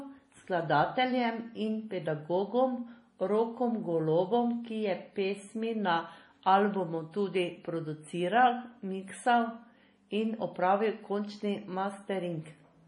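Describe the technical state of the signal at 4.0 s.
At 4.0 s the speech carries the same damage heard across the whole clip, most likely MP3 compression. Nothing sounds above 10.6 kHz, and the band below has a watery, swirling quality as weak frequency lines drop in and out from frame to frame. S sounds turn metallic and chirpy, and attacks smear. The heavy damage fits a low bitrate around 32 kbps. A plain low-pass filter would dull the top just as cleanly but leave no swirl beneath the cut-off.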